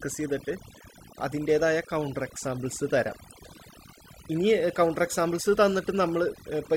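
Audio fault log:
Throughout: overdone noise removal. Heavy suppression gates bands near the noise floor, leaving near-silent gaps with twinkling specks and removing quiet parts of the voice. Spectrogram shows blotchy, holed, patchy energy.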